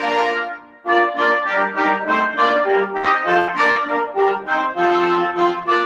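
Throughout the clip, a noise suppressor designed for speech is applied to music or sounds. It treats sustained and decaying parts of the audio as noise and pulls them down while transients pass largely intact. The result is a level that swings by a few decibels as the suppressor engages and releases, giving held material a pumping, thinned character rather than a steady body.

From 0.50 to 0.87 s, the suppressor cuts this sound much harder than the rest. The gain reduction reaches a deepest drop of about 12 dB. Over roughly 0.4 s, the sustained portion sinks audibly and its decay is shortened, while any sharp onset within the span comes through at closer to normal level. The effect is a hollowed-out passage where the sound seems to duck away.

At 2.97 to 3.06 s comes the first burst of packet loss, with about 60 ms of audio missing. The receiver extends the last sound for roughly 62 ms and fades it, so a held buzz or decaying hiss stands in for the real signal. 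Playback then resumes further along, skipping the lost material. The second burst, from 3.40 to 3.50 s, works the same way over a longer gap of 80 ms, with an 80 ms synthetic fill.

At the tail of each burst, at 3.04 to 3.06 s and 3.48 to 3.50 s, one 20 ms packet is a lost packet rebuilt from error correction. The decoder plays the low-bitrate redundant copy carried in the following packet, so there is no additional gap. Those frames sound rougher and noisier than their surroundings. If the call is full-band, the top of the spectrum briefly dips because the copy lacks it.

At 3.72 to 3.78 s, a short concealed packet loss removes about 40 ms. The decoder continues the preceding sound for 40 ms and blends it back into the real signal, producing a brief smear or wobble rather than a clear dropout. Any very short event in that window can disappear entirely.

The final 20 ms of that span, from 3.76 to 3.78 s, is another lost packet rebuilt from error correction. 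It is again audible as a momentary coarse, grainier texture before normal decoding takes over.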